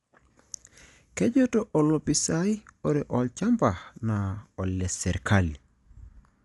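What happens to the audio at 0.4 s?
Likely Dolby Digital compression, fitting a 64 kbps bitrate, runs throughout: nothing remains above 11.4 kHz, and noise-filled starved bands make the speech dull and rough.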